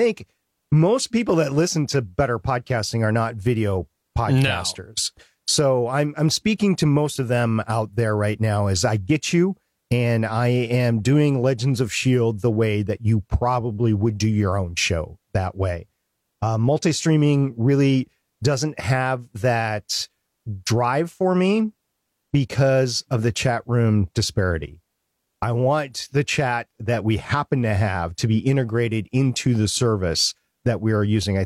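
No technical faults can be heard anywhere in the recording.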